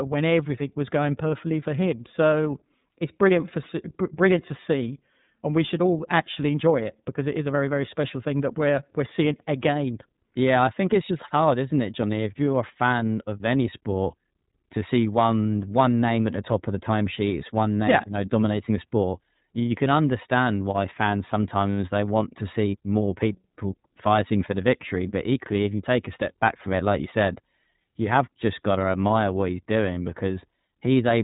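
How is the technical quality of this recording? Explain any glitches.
The recording has clear, plainly audible iLBC codec damage for its whole length. The speech is band-limited and slightly rough, with nothing above about 3.8 kHz. The iLBC encoder codes each frame's excitation independently, with frames that sound like 30 ms at roughly 13 kbps. That gives voiced sounds a grainy, synthetic edge and leaves sibilants dull and muffled.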